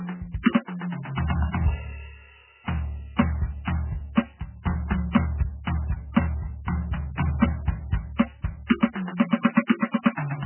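From start to finish this music carries heavy MP3 compression damage, likely from a starved encoder at a rate that fits roughly 8 kbps. Nothing survives above about 3.1 kHz, so it's dull and muffled, with a watery, swirling shimmer and smeared attacks throughout.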